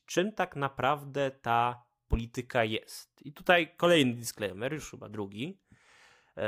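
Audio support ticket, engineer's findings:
No fault found on listening: the speech signal arrives intact, with no dropouts, distortion or timing irregularities audible in the path.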